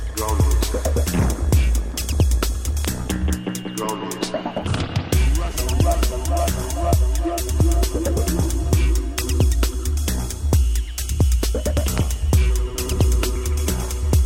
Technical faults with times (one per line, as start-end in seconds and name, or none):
2.85-2.87 loud pop
11.77-12.00 loud pop